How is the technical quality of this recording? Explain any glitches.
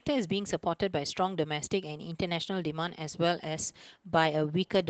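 The technical quality is noticeably compromised by low-rate codec damage across the whole clip. Opus voice compression runs from start to finish. The sound points to hybrid mode at a low rate, around 16 kbps: linear-prediction coding below 8 kHz with a thin transform layer above. The coarsely coded excitation leaves the speech plainly hoarse and faintly robotic. Unlike simple low-pass filtering, the top band isn't cut away; it survives.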